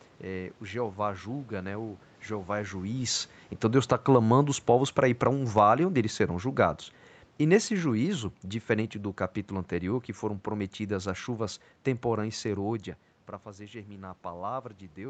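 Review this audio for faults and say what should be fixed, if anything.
Automatic gain falling from 2.9 to 12.73 s: the AGC judged the input too hot or its background too noisy and eased everything down about 8 dB, background included. To prevent it, set the mic input level lower so the AGC has nothing to pull back.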